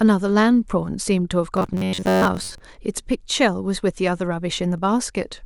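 From 1.57 to 2.59 s, the speech turns into a rigid, metallic buzz at about 93.8 Hz. This is robotic sound from repeated short buffers. New audio likely arrived too seldom, so a chunk of roughly 10.7 ms was repeated through most of the stretch.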